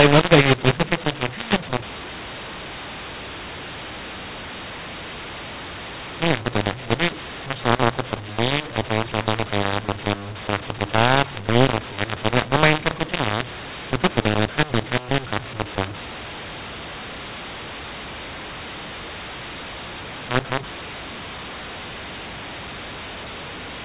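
Throughout, telephone speech coded as A-law is decoded as mu-law, a mu-law and A-law mix-up that scrambles levels, leaving the speech harsh and distorted and pauses filled with noise.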